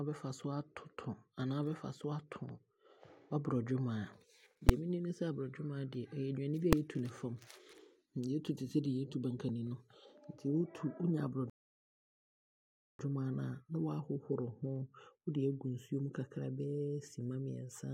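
At 4.69 s there is a sharp, very loud bang in the speech. This is invalid numbers at full scale. A calculation produced infinite or invalid values, and the output was pinned to one extreme value for one short block. That block lasts about 5.3 ms, which fits a 256-sample block. It is too brief to hear as two pops. At 6.73 s the same fault returns, even shorter at about 1.3 ms. That fits a 64-sample block. It is heard as a single, very loud bang.

From 11.50 s to 12.99 s the audio drops to silence. This is a rebuffering stall. The player ran out of downloaded audio and waited for more. Then the speech resumes exactly where it stopped. Nothing is skipped or repeated. The gap adds about 1.5 s to the running time. The pause is dead silent and unnatural, with no breath or room sound. Then the speech picks up again.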